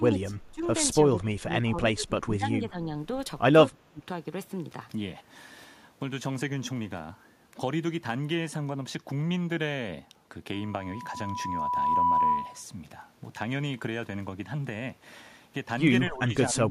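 The speech dips by around 20 to 25 dB at 0.0–0.62 s, 1.03–2.9 s and 3.85–4.04 s, likely speech suppressed in double talk, with the echo canceller muting the talker while both sides spoke. From 10.53 to 12.63 s a 988 Hz tone swells over about a second and a half to roughly 10 dB above the speech. This is loudspeaker feedback squeal, where the microphone–loudspeaker loop gain exceeded one at that frequency. The same double-talk dip, shallower at around 15 dB, returns from 16.1 s to the end.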